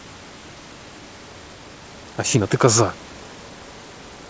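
At 1.52 s the speech lurches forward: roughly 0.7 s of material simply vanishes, and the audio on either side is butted together with no gap or fill. This is a skip ahead. A backlog of audio had already arrived, and the receiver discarded a stretch of it, either lost in transit or dropped when the jitter buffer overflowed, so playback jumped about 0.7 s closer to real time in one step.

From 1.61 s to 3.58 s the talking sounds hurried, running at about 116% of normal speed while the pitch stays put. This is a jitter buffer speed-up. With more audio queued than the buffer's target, the receiver trimmed tiny slices, each one or a few pitch periods long, over and over, shaving off about a third of a second to bring the delay back down. Throughout, the G.722 call path leaves nothing above 8 kHz.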